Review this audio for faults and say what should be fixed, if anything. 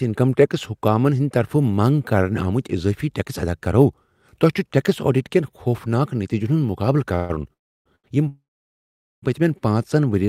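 Call audio freeze occurs three times: 7.15 to 7.31 s, where the last sound is held for about 137 ms; 7.53 to 7.88 s, a 325 ms hold that decays to silence; and 8.28 to 9.24 s, a 947 ms hold that goes silent before "پٔتۍمین پانٛژن". The likely cause is packets delayed in transit emptying the jitter buffer. The receiver extended the last sound, then resumed where it stopped, so nothing is lost but the audio now runs behind.

A short stall from a late packet occurs at 7.96 to 8.06 s. One packet missed its playout time, so the receiver stretched the preceding sound by 82 ms until it arrived, producing a briefly prolonged sound with a slight buzz or dip and no content lost.

To prevent both, fix the network path delay that causes these clustered hold-ups, and use an adaptive jitter buffer that grows its depth when arrival jitter rises.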